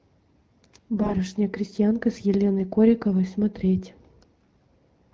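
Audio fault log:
0.96 to 1.17 s, AMR bit errors. For about 0.2 s the sound turns hoarse, scratchy and gargly while pitch and level hold. Roughly 7 percent of the weakly protected frame bits arrive flipped, so excitation pulses misplace and fine gain and spectrum values drift.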